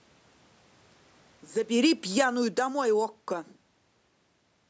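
Automatic gain falling runs from 1.71 s to 3.36 s in this speech recording: the level sags by about 8 dB over that span, and the room noise behind the voice drops right along with it. That shared fall marks the gain control itself backing off after judging the input too hot or its background noise too strong, rather than the speaker simply getting quieter. A talker's own movement would leave the background steady.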